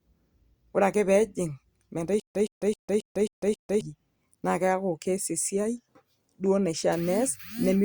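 From 2.20 to 3.81 s, a stutter with silent gaps: a 117 ms fragment repeats six times between 151 ms silences, likely a stalled stream retrying.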